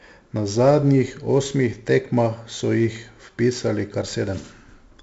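Speech running the full clip with 4-bit ADPCM compression throughout, and heavily damaged by it. Each sample is coded as a coarse 4-bit step from a predicted value, so the quantisation error rides along with the signal as a gritty hiss that swells on louder syllables, with roughness on sharp onsets where the step size lags. Nothing is present above about 7.7 kHz, which dulls the top end and fits a 64 kbps stream at a 16 kHz sample rate.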